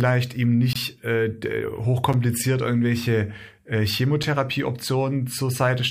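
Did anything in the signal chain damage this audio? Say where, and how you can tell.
Yes. The speech cuts hard to blocks of digital silence at 0.73 to 0.76 s, 2.13 s and 4.23 s. Gaps of 23 ms and 6 ms fit 1024- and 256-sample buffers not filled in time, pointing to driver or buffer underruns.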